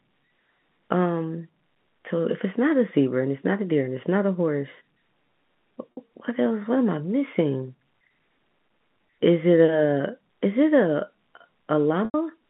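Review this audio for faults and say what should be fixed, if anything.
Two brief buzzy holds occur at 5.94–5.97 s and 12.05–12.14 s, where the sound freezes on a repeated tone before resuming. This is packet loss with pitch repetition. About 50 ms and then 90 ms of audio went missing, and the receiver looped the last pitch period to fill each gap. The longer gap fades toward silence before the sound returns. More jitter buffering or forward error correction on the transmission link would prevent these drops.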